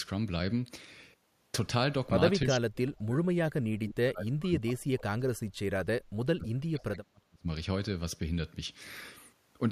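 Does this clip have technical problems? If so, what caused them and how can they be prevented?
Yes. The speech is heavily suppressed twice, from 2.46 to 5.29 s and from 5.53 to 7.48 s. In both stretches the level falls away, at its deepest by around 40 dB, so the talker nearly vanishes in places. This is likely speech suppressed in double talk. When both sides spoke at once, the echo canceller could not tell live speech from loudspeaker echo, so it turned everything down. A double-talk-aware canceller with gentler suppression prevents this.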